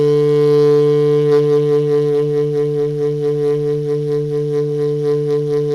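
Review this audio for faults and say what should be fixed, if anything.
The converter's sample clock is unstable throughout the music, with a timing wobble on the order of a couple of microseconds. This is sample clock jitter: each sample lands slightly early or late, and the resulting error scales with how steeply the waveform is moving. It sits roughly 45 dB below the music as a fine hiss and roughness that swells on loud, bright passages and falls away in quiet moments. Clocking the converter from a clean, low-jitter reference would prevent it.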